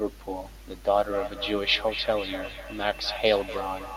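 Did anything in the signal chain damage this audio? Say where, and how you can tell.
Yes. From 0.88 s to the end, the speech comes back on itself at a steady interval of roughly a third of a second. The returns sound thinner and more ringing than the direct sound, peaking about 10 dB below the speech. That is feedback echo between two devices, a call-processing fault: a second device in the same room plays this microphone's signal, which is recaptured. Each echo canceller removes only its own device's output, so the loop persists.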